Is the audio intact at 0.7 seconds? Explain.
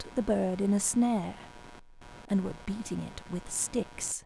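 No. At 0.7 seconds, as throughout the clip, computer activity noise sits under the speech: a buzzing, chirping layer pulsing around 100 times per second, roughly 20 dB below the speech. Changing load on the processor, graphics card or mouse shifts the ground shared with the audio circuit, so the buzz follows the machine's activity, not the sound. A spectrogram shows evenly spaced vertical striations through the gaps, and the waveform shows a rough, pulsing noise floor.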